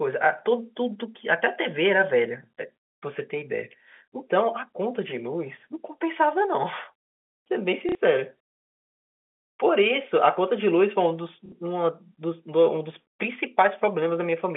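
Packet loss with last packet repeated hits at 7.89–7.95 s and 11.46–11.52 s: each 60 ms gap is filled by replaying stale audio, giving a brief robotic stutter.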